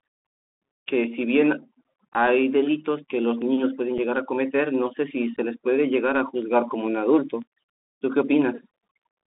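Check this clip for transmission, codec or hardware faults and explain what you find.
Two faults are present in the speech. A narrowband codec runs throughout, and three brief dropouts break the signal.

Bluetooth CVSD headset codec, throughout. The sound sits in a band of roughly 250 Hz to 3.6 kHz, which fits a 64 kbps CVSD link. Each sample is coded as a single up or down step. Loud, bright sounds outrun that step and distort. S sounds turn scratchy, over a grainy hiss.

Unconcealed Bluetooth headset packet loss, at 2.13 to 2.16 s, 3.98 s and 5.36 s. The first and last drop about 15 ms each. The middle one drops 7.5 ms. Lost audio is replaced by silence or an idle pattern. Each gap has hard edges that can click, and the sound briefly returns quieter.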